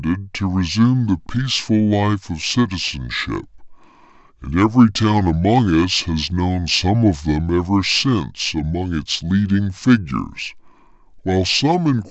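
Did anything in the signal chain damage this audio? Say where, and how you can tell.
Yes. The speech sounds low, slow and heavy for the entire clip, running at about 0.69 times normal speed and dropped about 6.5 semitones. That is a wrong sample rate at playback: audio recorded around 32 kHz appears to be clocked out at 22 kHz without conversion.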